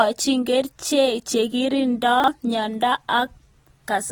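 Throughout the speech there is audible AAC compression damage, most likely from AAC-LC at a low bitrate, something like 32 kbps. The spectrum is empty above about 19.4 kHz, and the damage is plainly audible. The encoder has too few bits for its 1,024 frequency lines per frame, so it drops or coarsely quantises the weaker bands. That leaves the sound dull and smeared, with a swirling, fizzy texture on sibilants and held sounds.

From 2.2 to 2.28 s, chunks play out of order. Two adjacent blocks of about 40 ms are swapped, because one block arrived or was written one chunk late and plays after the block that should follow it. No audio is missing, but the sequence is wrong, and the swap creates three hard joins. The result is a brief jumbled moment.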